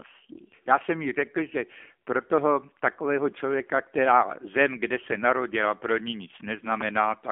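The whole clip runs through an AMR narrowband mobile codec, squeezed into a 250 Hz to 3.4 kHz phone band. The buzzy, synthetic edge fits a low rate around 7.4 kbps.

From 6.81 to 6.99 s there's a loud pop, actually two quick ones roughly 10 dB over the speech, likely a voltage spike from a plug, switch or static.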